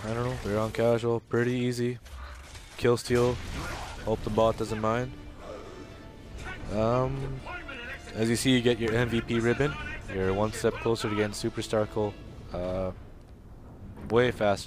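At 8.88–8.90 s there's a loud pop, a single sharp click well above the sound, then a smaller one at 14.10–14.12 s. Likely a voltage spike from a switch or static.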